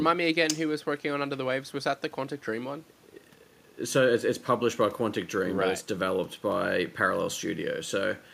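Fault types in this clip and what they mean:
Nothing stood out on listening to this speech recording.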